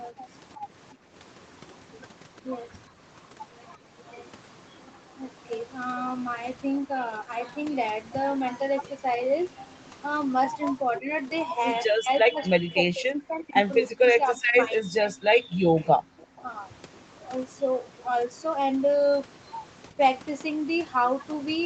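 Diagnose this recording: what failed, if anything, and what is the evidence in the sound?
Speech suppressed in double talk, in call processing: the speech dips by roughly 10 dB at 0.11–0.66, 11.0–11.1, 15.68–16.47 and 19.91–19.98 s, and by roughly 40 dB across 11.87–15.14 s. The likely cause is the echo canceller turning down both talkers when they overlap. The speech itself drops, not just the room.

Background gated by the echo canceller, in call processing: the room tone falls about 18 dB at 0.95–1.12 s, then returns.

Echo leak, in call processing: a faint copy of the speech, roughly 30 dB down, trails by 341 ms at 15.83–16.4 s. This is likely residual loudspeaker echo that the canceller did not remove. Its fixed delay distinguishes it from room reverberation.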